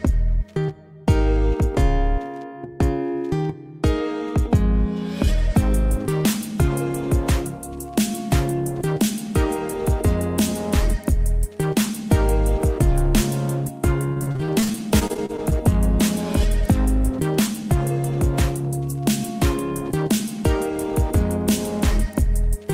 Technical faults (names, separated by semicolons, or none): repeated packet loss (robotic sound); jitter buffer speed-up